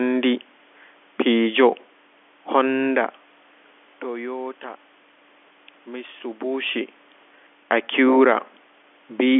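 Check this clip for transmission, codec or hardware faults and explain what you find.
No faults found: the speech sits in the narrow telephone band of G.711 coding, with room noise and level shifts around 3 s and 6 s as the talker moves relative to the microphone.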